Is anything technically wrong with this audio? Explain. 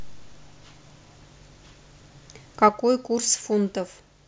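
Yes. At 2.69 s the speech drops by about 6 dB in a single step and stays at that lower level to the end at 4.28 s. This is a sudden gain jump, likely from a digital gain setting applied without any ramp, so the level changes between one sample and the next. The background noise falls along with the speech. On the waveform the envelope steps down abruptly at 2.69 s. On a spectrogram every band dims together at that instant.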